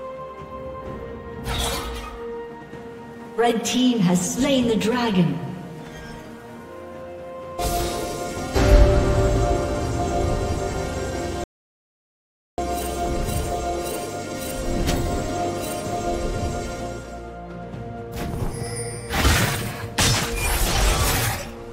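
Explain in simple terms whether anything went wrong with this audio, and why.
Yes. The recording likely lost its input for a moment, and the recorder kept writing pure silence: an audio dropout to silence. From 11.44 to 12.58 seconds the sound cuts out completely, with no background hiss, and about 1.1 seconds of audio is simply missing.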